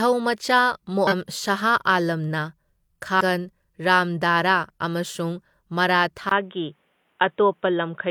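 Speech with damaged data in a compressed stream: brief glitches at 1.07–1.13 s, 3.16–3.21 s and 6.92 s, where the decoder lost frame sync. From 6.29 s the sound turns dull after a 20 ms gap, likely an input switched to a poorer device. The spectrogram goes empty above 3.8 kHz, with a faint new noise floor around 50 dB below the speech, and the waveform shows no clear level step.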